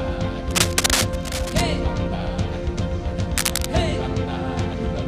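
From 0.50 to 1.62 s, and again from 3.36 to 3.66 s, dense, uneven crackling rustles over the audio at about the same loudness as the sound itself. This is cable scratch noise. A worn cable or connector being moved is the likely cause.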